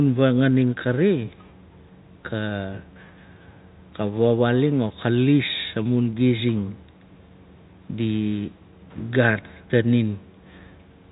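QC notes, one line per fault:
No fault found, so there is no line per fault to give.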